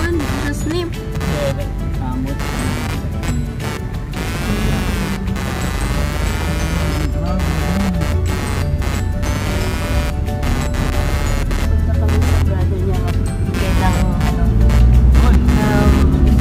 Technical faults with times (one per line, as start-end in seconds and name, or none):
0.00-16.40 computer activity noise